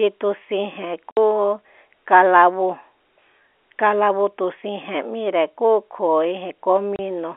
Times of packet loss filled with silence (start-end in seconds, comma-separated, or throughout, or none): 1.11-1.17, 6.96-6.99